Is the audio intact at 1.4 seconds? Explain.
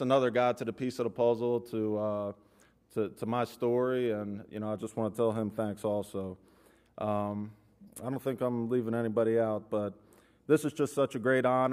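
Yes, at 1.4 seconds the audio plays through cleanly, with no dropout, click, distortion or other fault at that point.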